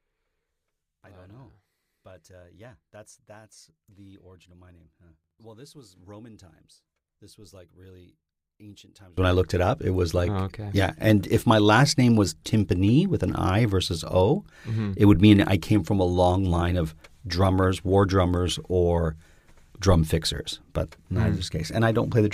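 Speech in which the opening 9.18 s, up to "when I looked it", drops about 27 dB and sounds faint, likely one channel inverted cancelling the centred voice on mono summing; the waveform shows a near-flat stretch, the spectrogram faint traces.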